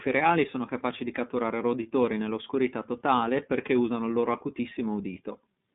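Speech heard through a narrow, boxy channel with a slightly rough, synthetic edge on every syllable, the damage plainly audible from start to finish. This is the iLBC codec: nothing above 3.8 kHz survives, and each short frame is coded independently, which fits its 30 ms, 13.33 kbps mode.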